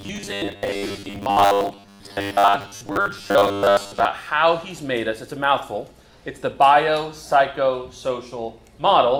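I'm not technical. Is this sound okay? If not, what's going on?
No. There is robotic sound from repeated short buffers from 0.01 to 4.06 s. During that stretch the sound becomes a stiff, metallic buzz at about 100 Hz. The likely cause is new audio arriving too slowly, so the playback keeps re-using the last tiny slice, about 10 ms long, to fill the gaps. Most of the sound in that stretch, roughly 70 percent, is these repeats, and the real material in between is skipped.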